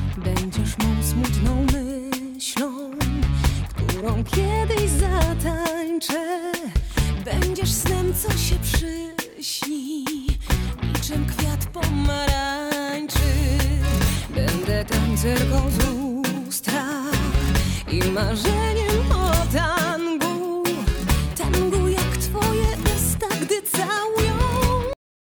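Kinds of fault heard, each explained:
Cut-off end: the final buffers were never written, so at 24.93 s the audio stops abruptly in the middle of a sound and falls straight to digital silence with no natural decay, leaving about 0.4 s of dead air before the file ends.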